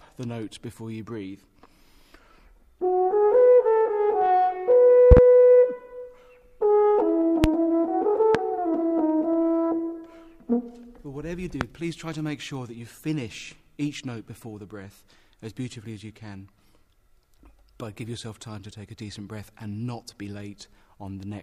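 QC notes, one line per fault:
5.11–11.65 s, loud pop: sharp pops land on the continuing sound at 5.11–5.20 s (a quick double), 7.44–7.47 s, 8.35–8.38 s and 11.61–11.65 s, peaking about 20 dB above it (the last nearer 15 dB). A voltage step, likely from a plug, switch, static or driver glitch, joined the signal and was shaped into a thump.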